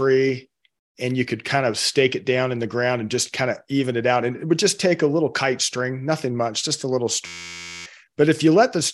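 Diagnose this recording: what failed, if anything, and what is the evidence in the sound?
A system hang loop at the driver or buffer stage. From 7.27 s to 7.86 s the speech stops and turns into a flat, steady buzz at about 86 Hz. That's one 11.6 ms chunk playing over and over, roughly 51 times, which fits a 512-sample buffer. The host or driver froze, and the audio hardware kept cycling through the same ring buffer until things recovered. Around 0.7 s of real audio is gone.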